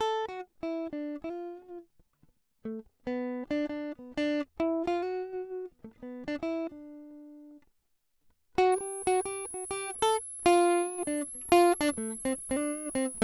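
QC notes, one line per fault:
8.72–13.23 s, switching supply whistle: a power supply running in audible burst mode or beating with another supply leaves a high whistle in the 10.3–11.2 kHz range, roughly 10 dB under the music.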